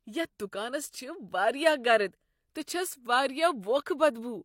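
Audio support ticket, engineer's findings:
Low-bitrate audio saved at a high bitrate, whole clip. Likely a low-bitrate earlier encode, consistent with HE-AAC near 32 kbit/s, re-saved as high-rate MP3. Bandwidth ends at 16.3 kHz; first-pass codec damage persists; larger file restores nothing.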